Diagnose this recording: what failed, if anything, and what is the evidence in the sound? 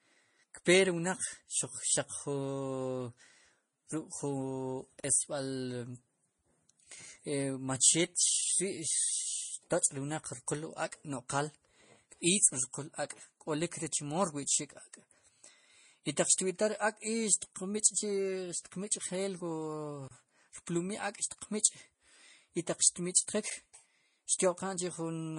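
Transcoding between lossy codecs runs through the whole speech clip. Nothing sits above 10.6 kHz, and two kinds of coding smear are heard together. This points to a low-rate MP3 that was likely re-encoded to low-rate Vorbis, each codec stacking its artefacts at the codec stage.

Blocks of digital silence occur at 5.00–5.04 s (40 ms), 20.08–20.11 s (30 ms) and 23.5 s (10 ms). The sound cuts out and returns with no fade, which fits a buffer that wasn't filled in time at the driver or buffer stage.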